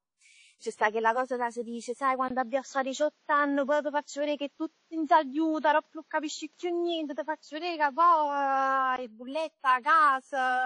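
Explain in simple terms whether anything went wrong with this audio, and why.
Two things went wrong in this speech clip. The first runs the whole way through. The sound has a ringing, washy quality, with a hiss that swells and fades along with the speech, and nothing comes through above about 10 kHz. That points to WMA compression, likely saved at a low-quality setting. The encoder squeezes each stretch of sound into blocks, smearing noise around each syllable and throwing away quiet detail and the highest treble.

The second is an input switched to a poorer device, which likely happened from 2.28 s to 8.98 s. At 2.28 s there's a tiny gap of about 20 ms, and then the speech turns duller, with nothing above about 7.6 kHz, a shift in loudness and a new background noise sitting well below the speech. At 8.98 s the clearer sound returns. A different microphone or headset would explain this, since it carries its own tone, level and noise.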